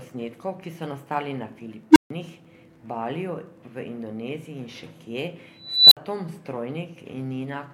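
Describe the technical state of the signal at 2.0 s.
At 2.0 s you're right in the middle of an unstable filter event, running from 1.91 to 2.10 s. A recursive filter's feedback runs away: a low tone around 300 Hz swells for about 53 ms, clips, then overflows, so 2.0 s falls inside the 145 ms dropout before it resets.

Under that there's Wi-Fi interference, running from 0.87 to 3.98 s. A nearby radio's beacon, every 102.4 ms, gets rectified by the audio circuitry, giving a faint ticking roughly ten times a second, well down under the speech.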